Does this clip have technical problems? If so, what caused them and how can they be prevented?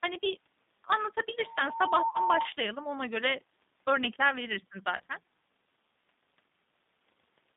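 Yes. The whole recording has gone through the G.729 codec at 8 kbit/s. It rebuilds each 10 ms frame of speech from a vocal-tract filter, a pitch predictor and a few pulses, so the result sounds slightly rough and synthetic. Only a telephone band of about 150 Hz to 3.7 kHz survives. On a spectrogram, energy stops sharply near 3.7 kHz with nothing above it, and harmonics look smeared. Preventing it means carrying the call on a wideband codec such as G.722 or Opus.

VoIP packet loss concealed by the speech codec occurs at 2.09 to 2.19 s and again at 4.97 to 5.01 s, right after "ona göre örnekler verirsin". About 60 ms is missing at the first point, which fits two lost packets, and about 30 ms at the second, which fits one. The decoder filled each gap by repeating its last pitch and filter at falling gain. This leaves a brief stretched sound, a buzzy tone or coloured noise, that fades and stays weak for a moment after audio resumes. 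On a waveform, the envelope decays smoothly instead of following the speech. On a spectrogram, flat, repeated harmonic stripes replace the normal formant movement. Preventing it means using a jitter buffer with forward error correction on a network with less loss.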